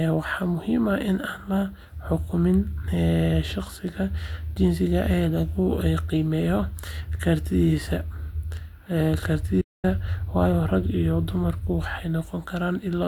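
Speech with a digital broadcast dropout from 9.61 to 9.85 s. The receiver muted on failed frames after an 8 ms fade, leaving a flat waveform line and a blank full-band gap on the spectrogram.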